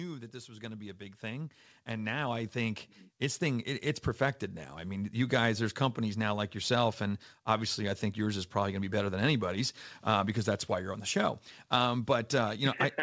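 A speech clip in which automatic gain rising runs from 0.32 to 5.24 s, ending just before "guys there's companies now". Over those five seconds the level climbs by about 13 dB as the automatic gain control, hearing the input as too quiet, turns its gain up step by step. Voice and background noise swell together, which sets this apart from a talker moving toward the microphone, where the voice would grow against a steady background. The audio carries nothing above 8 kHz, which fits a G.722 call path at 64 kbps.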